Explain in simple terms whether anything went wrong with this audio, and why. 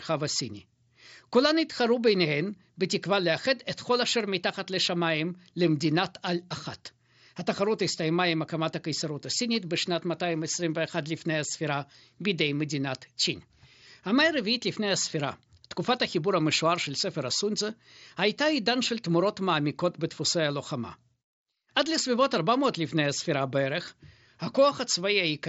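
Nothing went wrong here: the speech comes through a Bluetooth headset link using the mSBC headset codec, which carries sound up to about 7.7 kHz and nothing above it, exactly as that kind of connection is designed to work.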